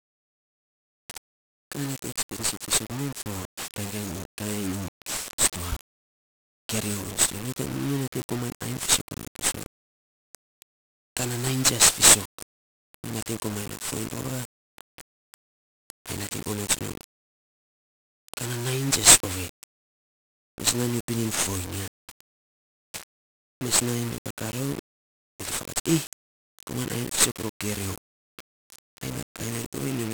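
From start to finish the speech carries heavy 1-bit DFPWM compression damage. Each sample is coded as a single up-or-down step on an adaptive level, so broadband quantisation noise rides on everything, giving a fuzzy, crackling texture with treble buried in hiss, consistent with a rate around 48 kbps.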